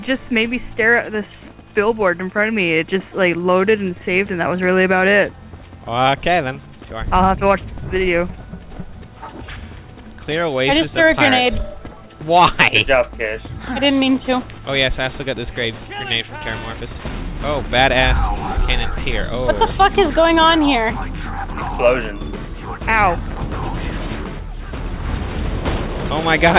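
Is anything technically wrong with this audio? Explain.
No, nothing is technically wrong; the band limit with nothing above 4 kHz fits a normal call path using G.711 A-law at 64 kbps.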